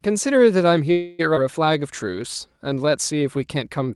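Speech clip with three network-style glitches. At 0.91 s the sound hangs as a fading buzz or hiss for about 275 ms until 1.21 s, then resumes right where it stopped with nothing lost: likely a call audio freeze from delayed packets draining the jitter buffer. At 1.35 s there's a skip ahead: around 150 ms of audio just vanishes, and the two sides are stitched together with barely a hitch. From 1.73 s to 3.39 s a jitter buffer slow-down stretches things to about 92% speed, adding 141 ms by repeating pitch periods, so it drags a little while the pitch holds steady.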